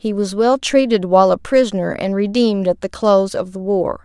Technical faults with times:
none

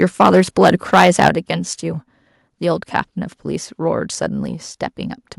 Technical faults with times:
0.01-1.28 microphone overload
1.29 microphone volume stepped down
2.96-3.00 microphone overload

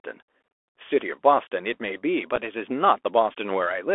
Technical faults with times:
0.00-3.94 Bluetooth CVSD headset codec
2.36 unconcealed Bluetooth headset packet loss

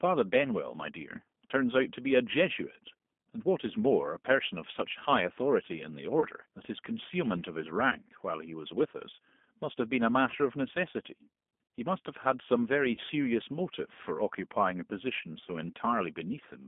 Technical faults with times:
0.00-16.67 G.729 codec
6.20-6.25 VoIP packet loss concealed by the speech codec
7.90-7.96 VoIP packet loss concealed by the speech codec
12.95-13.00 VoIP packet loss concealed by the speech codec

